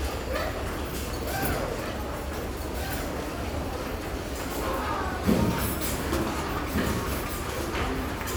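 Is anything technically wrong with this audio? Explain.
Yes. There is a doubled audio track throughout. The likely cause is the same signal reaching the mix twice, once directly and once through a slower capture path or a misaligned edit, so a second copy runs about a second and a half behind the first. That copy is full-band and only a few decibels quieter, with no decay or room colour, so every event is followed by a clean, dry repeat rather than a natural echo.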